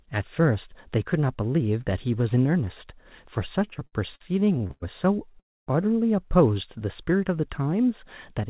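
From 3.6 to 4.84 s the speech breaks into repeated stalls (stutter). The playback buffer ran dry 13 times as packets arrived late or more slowly than they were played out, and each time the receiver extended the last sound until data arrived. About 335 ms was filled in this way, roughly 27% of that stretch, with the longest hold 104 ms. Nothing is lost, but the speech drags and catches, and the longer holds fade before resuming.

A short stall from a late packet follows at 5.32 to 5.35 s. One packet missed its playout time, so the receiver held the preceding sound for about 18 ms and then continued from the same point once it arrived. The effect is a brief over-long sustain with a slight buzz or dip. No audio is missing, and the total delay grows by those 18 ms.

Immediately after, from 5.40 to 5.69 s, comes a call audio freeze. The likely cause is packets held up in transit, which emptied the jitter buffer for about 271 ms. 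The receiver briefly continued the last sound and then went silent for about 260 ms, before resuming exactly where it stopped. The gap is heard as a hard pause inserted into the speech, with the rest of the audio pushed later rather than dropped.

From 7.73 to 8.49 s there is a jitter buffer speed-up. The buffer was holding more audio than its target, so the receiver shortened it by cutting out short pitch-period-length pieces many times in a row, about 50 ms in total. Playback runs at about 106% speed with the pitch unchanged, so the closing speech sounds slightly hurried. Throughout, the call path passes nothing above 4 kHz, which fits a 64 kbit/s narrowband telephone codec.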